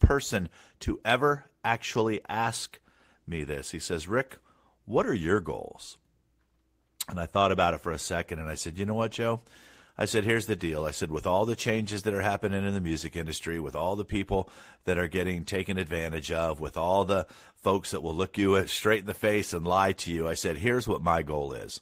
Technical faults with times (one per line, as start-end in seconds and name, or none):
none